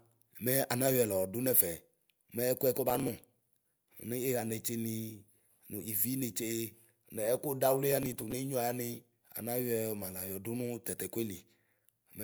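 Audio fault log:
2.90–3.62 s and 7.92–8.32 s, processor overload crackle: a gritty, tearing crackle rides over the speech in both spans. Overloaded processing repeatedly missed its deadlines, skipping roughly twenty tiny buffers (fitting about 1.5 ms each). Each skip left a hard-edged gap.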